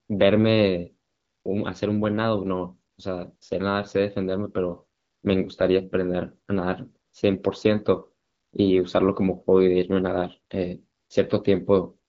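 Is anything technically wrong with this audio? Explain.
Yes. During pauses, at 0.07–0.09 s, 1.07–1.45 s, 2.91–2.97 s, 3.35–3.41 s, 4.97–5.23 s, 7.05–7.13 s, 8.23–8.53 s and 10.97–11.09 s, the background turns into a smooth, steady hiss that switches in and out. This is AMR comfort noise: the sending phone judged the talker silent and stopped sending speech frames, and the receiver filled each gap with synthetic noise. The clip also carries the light coloration of wideband AMR at 12.65 kbit/s.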